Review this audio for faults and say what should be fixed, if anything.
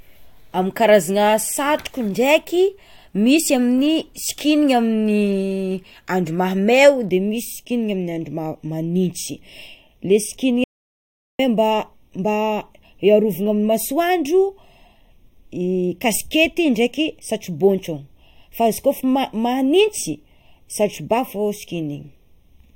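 From 7.09 s to the end of the recording, one channel arrives a fraction of a millisecond behind the other, and the two are then summed to mono. This is channel delay, and it produces comb filtering: components common to both channels cancel at evenly spaced frequencies, with the first notch around 1.5 kHz. The speech turns hollow and phasey from that point on. Aligning the channels before any mono fold-down, or recording from a single channel, would prevent it.

Between 10.64 s and 11.39 s, the input was lost while the recorder kept writing silence, most likely because of a momentary disconnection or mute upstream. This audio dropout to silence leaves a gap of about 0.75 s of silence with no room tone. The speech cuts off in mid-flow and resumes abruptly, and whatever was said during the gap is gone. Securing the input connection and monitoring levels during capture would prevent it.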